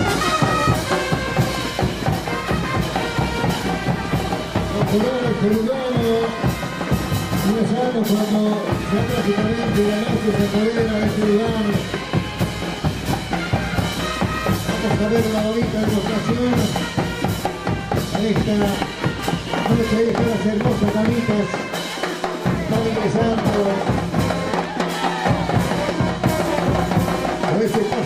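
Faults occur at 4.11, 12.10 and 20.10 seconds. Each is an overlap between stream segments. Two 4-second segments claim the same moment, and the player trims the overlap. About 9 to 14 ms of sound disappears. The waveform jumps, heard as a tiny skip.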